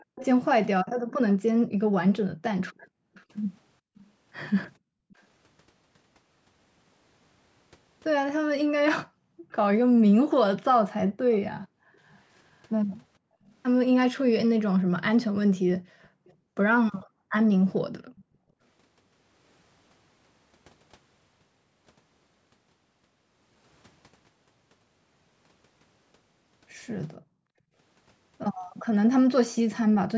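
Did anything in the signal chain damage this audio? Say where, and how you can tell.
Yes. Echo leak at 0.00–4.03, 9.50–12.16 and 16.03–18.24 s: a faint copy trails the speech by 444–473 ms, about 20–30 dB down. This is likely loudspeaker pickup that the call's echo canceller failed to remove.

Background gated by the echo canceller at 0.84–5.13, 9.06–18.6 and 27.17–27.74 s: the room sound dips by up to about 40 dB whenever the canceller clamps the microphone during far-end playback.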